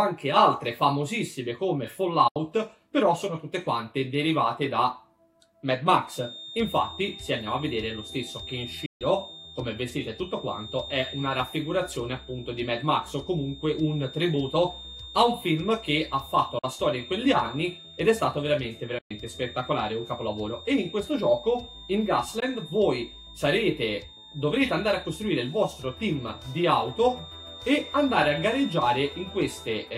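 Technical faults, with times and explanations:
2.28, 8.86, 16.59, 18.98 and 22.4 s: Bluetooth dropout. Abrupt silent gaps of 73, 145, 44, 116 and 15 ms occur, and the sound resumes further along rather than where it stopped. This is likely caused by audio packets lost on the wireless link.
6.0 s to the end: feedback whistle. A thin, steady 3.6 kHz tone sits about 20 dB below the sound and swells and fades slowly in level. It never swells into a runaway howl, which likely points to a loudspeaker-to-microphone loop held just at the edge of feedback.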